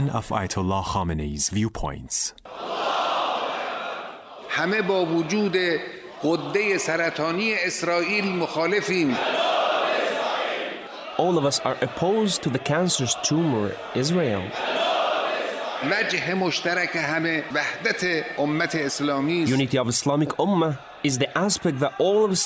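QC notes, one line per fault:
Nothing stood out on listening to this audio.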